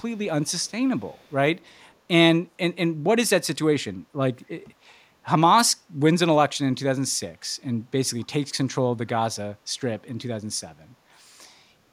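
Echo leak appears from 0.46 to 0.71 s, 0.98 to 1.34 s and 1.61 to 1.93 s: a delayed copy of the speech, trailing it by 254 ms, sits very faintly beneath it, in brief scraps, and is weakest in the third stretch. This is likely a far-end loudspeaker whose sound reached its microphone and slipped past an incompletely converged echo canceller, so fragments were returned down the line.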